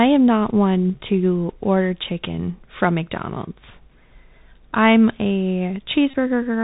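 A speech recording that has passed through a Bluetooth headset link running the narrowband Bluetooth CVSD headset codec, which fits 64 kbps CVSD, coding each sample as a single up-or-down step. Everything above 4 kHz is gone, loud high-frequency sounds outrun the adapting step and distort, s sounds come through scratchy, and a granular hiss sits under the speech for the whole clip. Near the end, from 6.10 to 6.15 s, voice packets between headset and phone were lost and the chip re-decoded the previous packet in their place, a Bluetooth headset packet repeat. That loop, repeating every 3.75 ms, replaces about 30 ms of speech with a brief steady buzz near 267 Hz, consistent with roughly eight lost packets.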